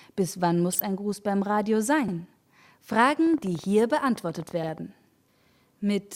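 A short stretch of DAB burbling sits at 0.73 to 0.85 s: bit errors slipping past error correction corrupt the MP2 data, so individual sub-bands jump in level, which fits about six damaged frames. It is heard as brief blips of noise, and on a spectrogram as blocky, isolated patches of energy in separate frequency bands. Overlapping chunks cause a stutter at 2.08 to 2.14 s, where about 50 ms plays twice because the next processing chunk, which fits a 2.5 s chunk length, began before the previous one ended. The waveform shows a short repeated segment with a discontinuity at the join. From 3.06 to 4.79 s a train of clicks ticks over the sound at about 12.6 per second with irregular spacing, roughly twenty pulses about as loud as the programme itself. The clicks appear as thin vertical lines on a spectrogram and sharp spikes in the waveform, likely from electrical interference or a struggling interface.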